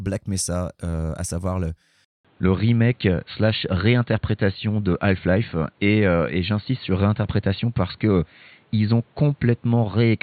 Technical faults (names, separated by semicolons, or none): input switched to a poorer device